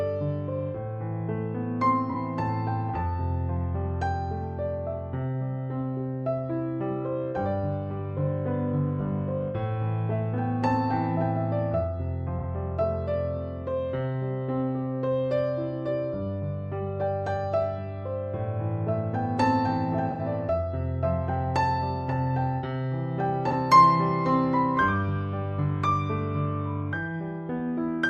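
AAC frame loss with concealment occurs at 2.10, 12.38 and 23.48 s, each about 43 ms, and at 20.10 s for about 85 ms. The decoder rebuilt the missing audio from the preceding spectrum, so each gap is a brief smeared, noisy patch rather than the clean silence of a plain dropout.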